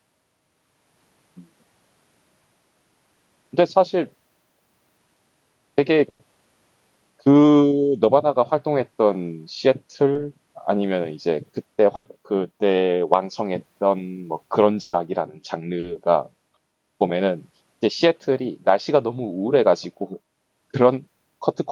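At 6.09 to 6.21 s the speech hits a burst of packet loss: roughly a tenth of a second never arrived, so the receiver stretched the last sound and faded it, giving a held buzz on voiced sound or a dying hiss otherwise, before the talk picks up further along. The same happens at 11.95 to 12.07 s and, slightly longer at about 120 ms, at 14.81 to 14.95 s. The length and the audible jump in content set these apart from the shorter dropouts.

Those shorter ones are short concealed packet loss, at 10.13 to 10.17 s (about 20 ms patched) and 15.79 to 15.85 s (about 40 ms). Here the decoder briefly continued the preceding sound and blended straight back into real audio, so the speech carries only a quick smear or wobble rather than a sustained buzz. All of this rides on an Opus call path whose coding keeps detail up to about 12 kHz.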